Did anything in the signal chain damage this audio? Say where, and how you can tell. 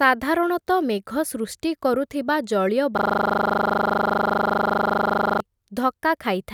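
Yes. A system hang loop at the driver or buffer stage, from 2.98 to 5.40 s. One 40 ms slice of the speech repeats exactly, some 60 times, giving a rigid 25 Hz buzzing stutter. The host froze while the hardware kept replaying its ring buffer.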